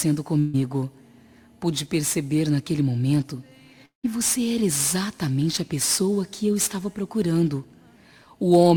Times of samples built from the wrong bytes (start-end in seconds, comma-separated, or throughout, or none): none